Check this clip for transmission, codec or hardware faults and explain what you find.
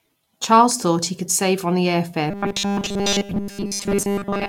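One fault is audible. Robotic sound from repeated short buffers runs from 2.30 s, just after "on the air fare", to the end of the clip at 4.49 s. The speech turns into a rigid metallic buzz at 200 Hz. That pitch is what a 5 ms slice repeated back to back would produce. The likely cause is new audio arriving too seldom, with the player looping the last fragment instead of the real signal for essentially the whole stretch.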